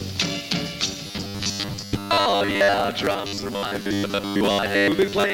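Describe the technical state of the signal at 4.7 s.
At 4.7 s the signal carries robotic sound from repeated short buffers, running from 1.07 s to the end. Short stretches are likely being replayed, forcing a rigid 100 Hz metallic buzz. A corrupt frame decoded also hits from 4.65 to 4.72 s. A few damaged frames put energy at the wrong frequencies, giving an error peaking near -10 dBFS.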